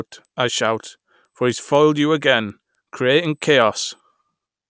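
The resampler was restarted on every block, so each 250 ms block was converted without its neighbouring samples, leaving a small error at every edge. The conversion fits a 24 kHz to 16 kHz change. Throughout the speech, regular ticks sound at 4 per second.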